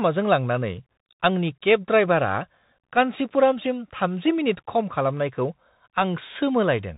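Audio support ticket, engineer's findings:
Muffled, phone-band speech throughout, nothing above 4 kHz; s sounds scratchy, loud bright passages break up, granular hiss underneath. Bluetooth CVSD headset codec: one-bit up/down delta coding, consistent with a 64 kbps link, adaptive step lagging fast transients. Damage plainly audible.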